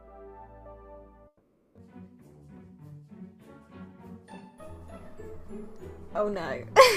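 At 1.27 s the sound cuts out for about half a second, returning at 1.78 s. What you hear in the gap is the last bit of audio carried on as a fading buzz or hiss that sinks into silence. That's most likely a long network dropout: packets stopped arriving, the receiver papered over the hole with a synthetic continuation, and when audio resumed, roughly 480 ms of the original was simply gone rather than delayed.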